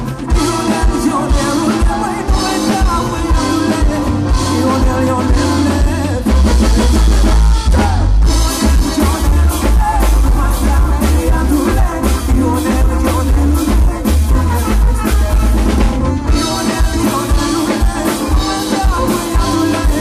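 Hard clipping runs throughout: overdriven by about 7 dB, roughly a tenth of samples hit the ceiling, leaving flat-topped waveform peaks, broadband spectrogram smear, and harsh fuzz.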